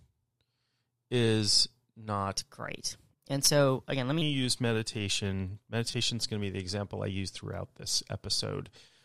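A speech clip with a section at the wrong speed from 2.36 to 4.22 s, running 1.16 times fast and about three semitones high, likely from playback against the wrong clock. Unlike a pitch shift alone, pace and pitch rise together, so the speech sounds hurried as well as higher. Corrupt frames were decoded anyway at two points: a loud error at 3.45 to 3.48 s, peaking around -10 dBFS, and a fainter one near -30 dBFS at 5.91 to 5.94 s spanning a couple of frames. Each holds for about the length of its damaged frames with misplaced spectral energy, which sets it apart from a single-sample click.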